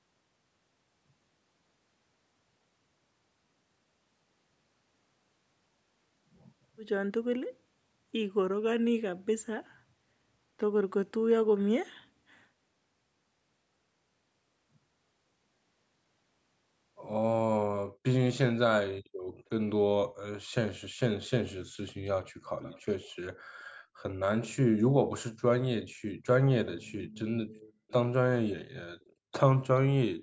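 Faint delayed copies of the speech surface at 22.62–22.85 s, 23.08–23.15 s, 27.88–27.93 s and 29.0–29.13 s, the first one clearest and the rest weaker. This is an echo leak, likely from a far-end loudspeaker whose echo canceller let scraps through. Unlike room reverberation, which smears continuously, these are brief fragments that repeat the speech after a fixed gap of about 426 ms.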